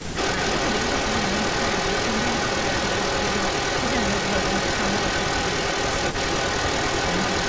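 A speech recording from a call, with two faults. From 0.00 to 0.16 s the level dips by roughly 10 dB over about a tenth of a second in total. This is speech suppressed in double talk, likely because the echo canceller could not separate the near talker from loudspeaker echo and turned both down at once. On a waveform it shows as a brief pinched envelope at the very start. Through the whole clip, from 0.00 s to the end, a second copy of the speech trails the original by 367 ms, at roughly 5 dB relative to the direct sound. This is echo leak, likely from a far end on loudspeaker whose canceller let part of its microphone pickup return down the line. On a spectrogram the speech's harmonic pattern reappears shifted 367 ms later. A waveform shows ghost bursts filling the gaps between phrases. The call's microphone processing also shows, with an empty band above 8 kHz on the spectrogram.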